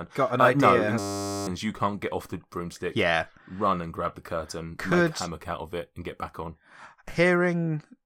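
At 0.99 s a system hang loop starts: playback froze while the hardware kept replaying a 10 ms buffer, giving a steady 100 Hz buzz until 1.47 s, with about half a second of speech lost. Unlike a stutter, every repeat is identical.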